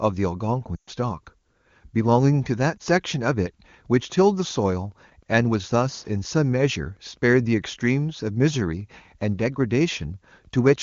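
Lost AMR speech frames hit at 0.76 to 0.90 s, where the decoder stretches the last good frame with falling gain and the speech smears and fades, and at 2.78 to 2.81 s, where there is a brief dip. From 3.94 s to the end, Wi-Fi interference adds faint ticking every 102.4 ms, about ten times a second. These are rectified beacon pulses, roughly 40 dB below the speech.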